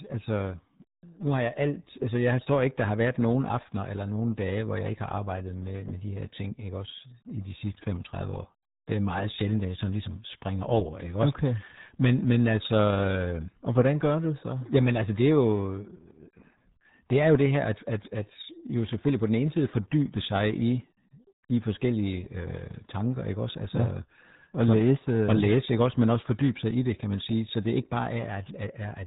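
From start to finish the speech runs through the RealAudio 14.4 codec, and it's heavily mangled. Nothing gets past about 3.8 kHz, so it's dull and boxy, and the coarse coding leaves a gargly, watery smear, which fits an 8 kbit/s dial-up stream.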